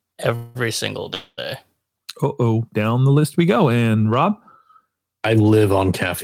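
Call audio freezes occur at 0.35 to 0.57 s and again at 1.14 to 1.40 s in this speech. Each time the speech stalls and the last sound is stretched into a fading buzzy hiss, about 196 ms and 235 ms long, the second ending in a brief 20 ms silence. The likely cause is delayed packets draining the jitter buffer. When they arrive the speech resumes exactly where it stopped, so nothing is lost and everything after each freeze runs correspondingly later.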